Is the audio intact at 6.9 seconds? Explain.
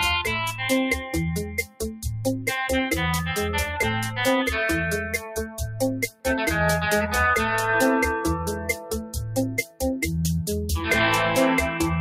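No. A noise suppressor applied to music or sounds stays active throughout, including at 6.9 s, treating sustained tones and reverb tails as noise. It pulls them down by roughly 5 dB while attacks pass, so held sound pumps and thins.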